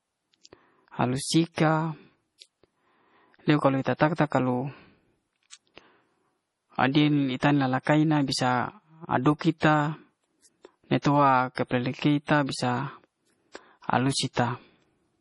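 From start to finish the speech carries heavy MP3 compression damage, likely from a starved encode that fits roughly 32 kbps. Weak frequency lines flicker in and out between frames, giving a watery or swirly texture, and everything above 11.3 kHz is gone.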